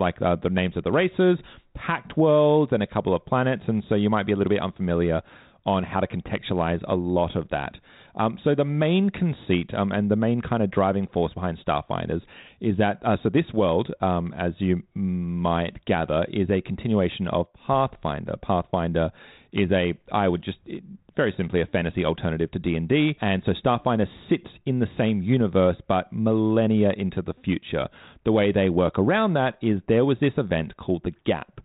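No faults are audible anywhere in the speech.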